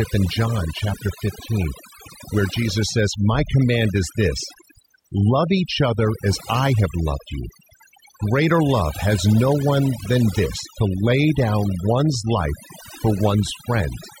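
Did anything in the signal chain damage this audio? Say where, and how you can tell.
Yes: overdone noise removal in call processing throughout. Noise-like bands are cut, so the spectrogram shows empty background with specks.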